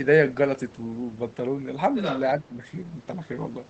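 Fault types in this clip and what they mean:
Other side's voice leaking through: Between 1.95 and 2.2 s, a second voice can be heard under the main speech. It is only slightly quieter than the talker. The likely cause is far-end sound from a loudspeaker reaching the microphone without being fully removed by the echo canceller. The leftover echo plays on top of the wanted speech for about a quarter of a second.
Speech suppressed in double talk: Between 2.38 and 2.65 s, the main speech drops sharply in level, by around 20 dB at its deepest. The whole affected stretch lasts about 0.3 s. The likely cause is both sides talking at once. The echo canceller cannot tell its own talker from the loudspeaker echo, so it pulls the level down and takes the wanted speech with it.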